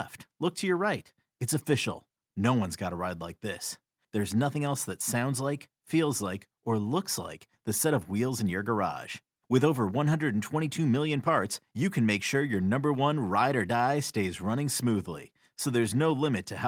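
No technical faults are audible anywhere in the speech.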